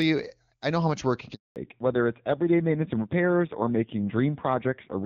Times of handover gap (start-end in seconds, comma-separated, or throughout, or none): 1.34-1.56